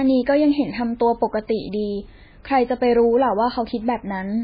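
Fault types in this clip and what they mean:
MP3 compression: The speech is band-limited with nothing above 5 kHz and carries heavy watery, swirling artefacts as weak spectral detail drops in and out between frames, with smeared consonant onsets; this likely comes from MP3 coding at a very low bitrate, around 16 kbps.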